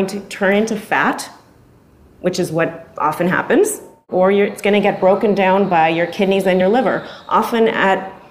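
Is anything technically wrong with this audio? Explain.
Yes, there's one glitch: a compressed frame is skipped at about 6.60 s. Roughly one frame, around 20 ms of audio, never gets played, which fits a 23.2 ms frame, so the sound jumps ahead. You hear the audio lurch forward at that point, with a short discontinuity where the missing frame should be.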